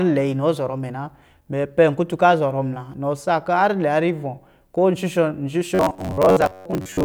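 From 5.75 s to 7.05 s, where the clip ends, the speech turns robotic. This is robotic sound from repeated short buffers. A rigid, metallic buzz sits at about 93.8 Hz, and the speech only loosely follows its own rhythm underneath. The likely cause is audio arriving too seldom. The gap is filled by replaying a slice of roughly 10.7 ms, which fits that buzz frequency. About half the sound is repeated material, and the real audio in those gaps is lost.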